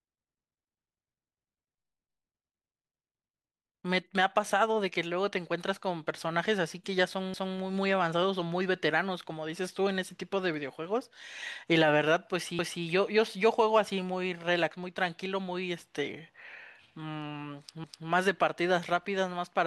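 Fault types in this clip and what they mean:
Overlapping chunks: The speech was handled in 5 s blocks, and each block began 250 ms before the previous one ended. So that quarter second plays twice at every join. Stutters are heard at 7.34–7.59 s, 12.59–12.84 s and 17.84–18.09 s.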